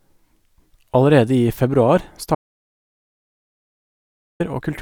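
After "i februar", at 2.35 s, speech cuts to total silence until 4.40 s. This is an audio dropout to silence, likely lost input recorded as zeros.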